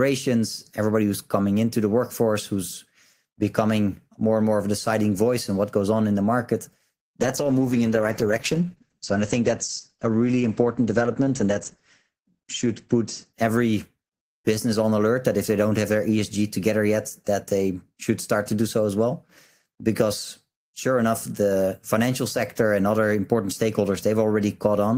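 After "on in the market", 7.2–14.27 s, a call bitrate drop muffles speech above 8 kHz, coarsest for about 5.3 s; unlike packet loss, nothing drops out.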